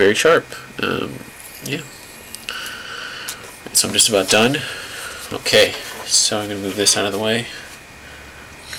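Distortion grips the loud peaks of this audio at 0.00–0.37 s, 3.77–4.55 s, 5.53–5.64 s and 6.14–6.26 s: hard clipping, with peaks overdriving a stage by about 4 to 9 dB and being sheared flat.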